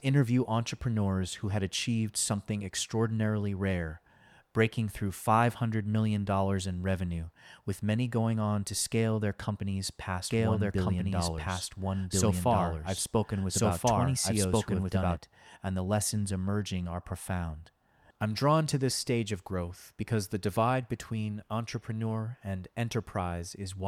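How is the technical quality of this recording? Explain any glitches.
There is one glitch, a doubled audio track from 10.29 to 15.17 s. An undecayed copy about 1.5 s late, at roughly equal level, most likely comes from a second, slower capture path. It starts and stops abruptly and has no room colour, unlike an echo.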